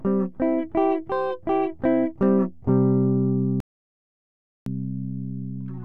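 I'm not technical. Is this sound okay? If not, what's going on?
No. At 3.60 seconds the sound cuts out completely. It stays totally silent until 4.66 seconds, about one second. This is an audio dropout to silence. The input was likely lost briefly, so nothing was captured. Whatever happened then is gone.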